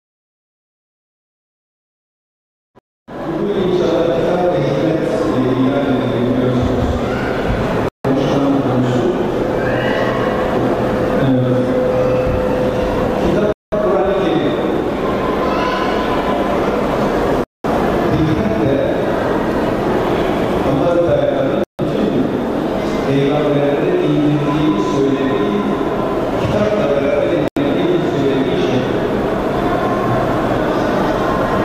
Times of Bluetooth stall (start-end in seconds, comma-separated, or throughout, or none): 2.79-3.10, 7.88-8.06, 13.53-13.74, 17.44-17.66, 21.64-21.80, 27.48-27.58